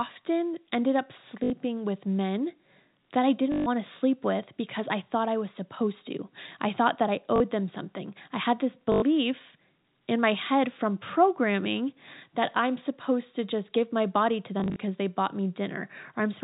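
At 1.44 s, 3.52 s, 7.36 s, 8.92 s and 14.6 s the speech breaks into a brief robotic stutter, lasting about 60, 140, 40, 100 and 100 ms, with the last spread in short gaps over 160 ms. This is packet loss with the last packet repeated: the receiver replays the previous chunk until fresh data arrives. The 50 Hz buzz fits 20 ms packets. The narrow G.711 telephone band stays audible throughout.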